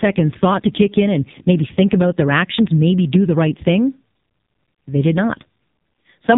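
From start to finish the speech carries the sound of an AMR narrowband mobile codec. Nothing above about 3.8 kHz survives, so the voice is boxed into the old telephone band. The codec rebuilds speech from a vocal-tract model fed by sparse pulses in 20 ms frames, and here the damage is heavy: a buzzy, synthetic edge throughout, which fits one of the low AMR-NB modes around 5.9 kbps.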